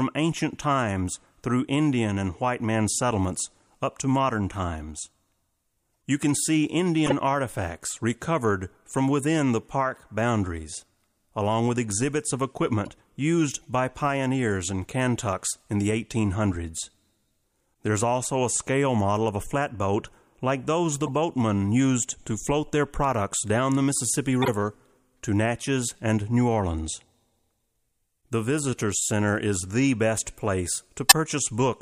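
Corrupt frames decoded at 5.95, 7.06–7.12, 12.85–12.89, 16.52–16.56, 21.06–21.09, 24.42–24.50 and 31.05–31.12 s. Damaged data plays as brief chirps and noise bursts, ranging from faint to loud near the end after "is the best place".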